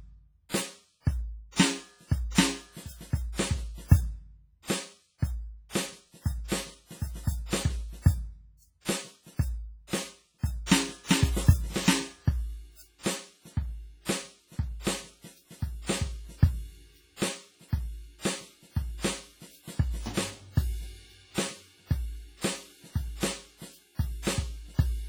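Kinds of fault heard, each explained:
WMA compression: The music sounds washy and ringing throughout, with a hiss that swells and fades along with the sound. Fine detail is missing, leaving a smeared texture. This is likely the work of Windows Media Audio, a transform codec. Its long blocks spread quantisation noise across tens of milliseconds, and weak frequency lines are thrown away. The heavy damage fits a low bitrate of around 24 kbps.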